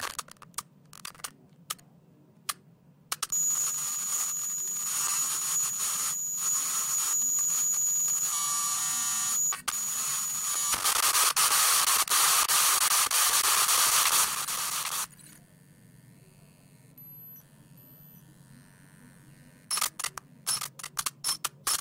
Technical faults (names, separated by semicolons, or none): doubled audio track